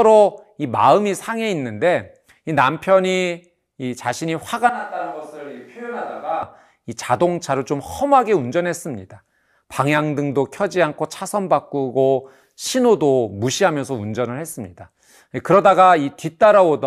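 From 4.69 s to 6.43 s the speech abruptly turns roomy and hollow, with thinner bass, and drops by about 10 dB while room noise rises to roughly 35 dB below the speech. At 6.43 s the close, full sound snaps straight back. This is a switch to a distant microphone: the close microphone's signal likely dropped out for that stretch, and a microphone further away, such as a camera's, covered the gap, picking up more room and less of the speaker.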